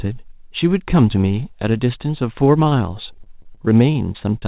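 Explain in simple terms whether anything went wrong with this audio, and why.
Repeated packet loss hit the call from 2.64 to 4.44 seconds: fourteen short chunks of sound went missing, each up to about 26 ms, and the receiver papered over each one by stretching the sound just before it. That makes the speech choppy and robotic in that last stretch.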